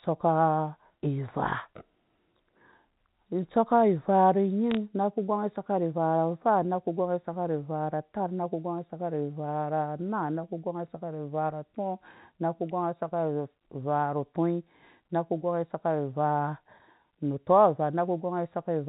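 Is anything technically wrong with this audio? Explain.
Yes. From 4.71 to 4.77 s there are bit errors on a digital phone line: on the G.711 path, a small fraction of a percent of bits flip, so isolated samples jump to wrong values and make sharp ticks. The waveform shows single-sample spikes, and the spectrogram shows thin vertical lines across the band up to 4 kHz.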